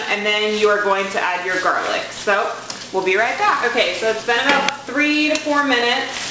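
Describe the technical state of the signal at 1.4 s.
At 1.4 s, as across the whole clip, the top end sounds gritty and metallic, with energy pressed hard against an 8 kHz ceiling. This is aliasing: content above half the new rate folded back unfiltered, around 20 dB below the signal, which fits a drop to 16 kHz.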